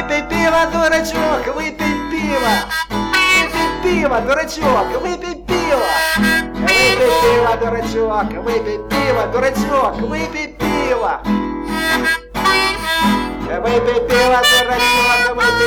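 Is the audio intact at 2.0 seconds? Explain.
No, the peaks at 2.0 seconds crackle with harsh fuzz from hard clipping, present throughout. The signal is overdriven by about 9 dB, so a small share of its peaks are sliced flat.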